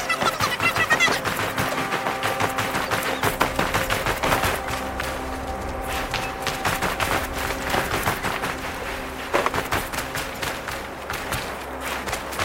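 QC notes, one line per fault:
Throughout: audio read two samples at a time (double speed). Each pair of samples is taken as one frame, so the sound runs twice as fast and sits 12 semitones, an octave, higher.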